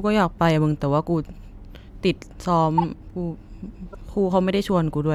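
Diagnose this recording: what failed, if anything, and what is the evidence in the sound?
Codec stage: corrupt frames decoded at 2.78–2.84 s and 3.93–3.95 s, heard as chirp-like bursts, the first louder. Flipped bits misplaced energy across a few frames each.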